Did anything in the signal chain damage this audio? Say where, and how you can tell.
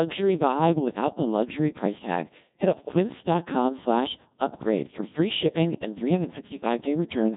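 Yes. The damage is at the codec stage: the speech passed through a Codec 2 vocoder, and the heavy damage runs through the whole clip. This vocoder does not keep the waveform. It sends only pitch, voicing, energy and a coarse spectral envelope, and the decoder rebuilds the voice from sine waves. The result is robotic and buzzy, with nothing above 3.8 kHz. That degree of coarseness points to a rate of around 1.6 kbit/s.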